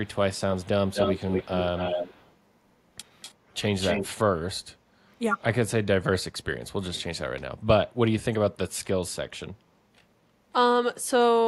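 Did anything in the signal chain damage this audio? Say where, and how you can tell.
Yes. Call processing is the stage. An echo leak runs from 0.04 to 2.35 s, then again at 3.21 to 3.33 s and 3.81 to 4.09 s. Each time a copy of the speech trails it by 246 ms. In the first and third stretches it sits about 5 dB below the speech, and in the second about 20 dB below. It is likely from a loudspeaker at the far end whose echo canceller did not fully remove what the microphone heard. A reverb tail would smear the sound, but this returns as a distinct copy at one fixed delay.

Background gated by the echo canceller also sits in call processing. The room sound dips at 3.35 to 3.48 s by about 8 dB, at 4.75 to 5.09 s by about 11 dB, and at 7.55 to 7.67 s by about 9 dB, each time for roughly a tenth to a third of a second. The canceller pulled the microphone down while the loudspeaker played, then released it. 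Unlike a network dropout, the sound does not vanish or stutter. The background only sinks and then comes back.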